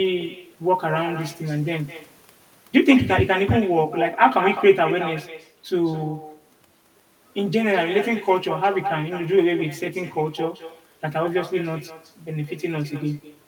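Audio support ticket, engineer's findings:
Echo with no canceller, present for the whole clip. Speech shadowed by a quieter copy, about 11 dB down, trailing by around a fifth of a second. Probable component: far-end loudspeaker into open microphone, no echo cancellation. Distinguishing: a discrete delayed repeat with a thin tone, not the smooth decay of local reverb and not the tight doubling of a short slapback. Echo gap matches network round trip.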